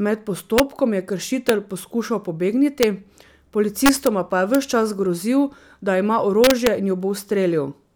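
Integer overflow cracks the speech at 0.58, 1.49 and 2.83 s, from 3.86 to 4.07 s just before "pa je ves čas", at 4.55 s between "pa je" and "ves čas grozil da", and from 6.44 to 6.67 s after "čas grozil da ima". Peaks only about 0 to 2 dB over the limit wrap to the opposite extreme instead of being held there. The result is violent snapping cracks, far harsher than clipping's flattened fuzz.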